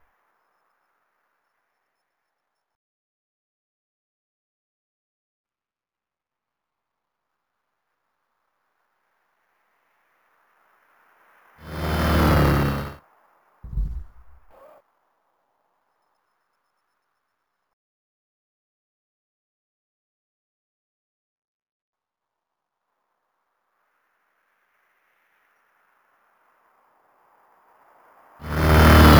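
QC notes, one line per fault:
Throughout: imaging from sample-and-hold upsampling. The sound appears to have been raised from 16 kHz to 44.1 kHz by repeating samples without smoothing, so the spectrum folds into a mirrored copy between 8 and 16 kHz at about 22 dB down. It is heard as a metallic fizz that follows the level, and the spectrogram shows inverted harmonics above 8 kHz with stair-stepped waveform edges.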